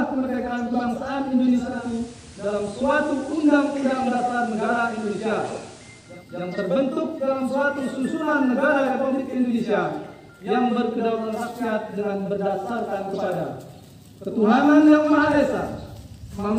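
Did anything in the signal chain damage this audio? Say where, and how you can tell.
Yes: digital radio blending to analogue at the tuner, 1.53–6.27 s. Over 0.41 s fades, the spectrogram shows FM's hiss floor, roughly 25 dB down.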